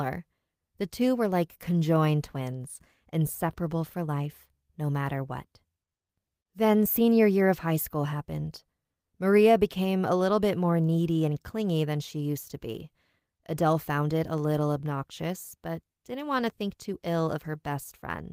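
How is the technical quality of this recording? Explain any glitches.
No technical faults are audible anywhere in the speech recording, so there are no glitches to explain.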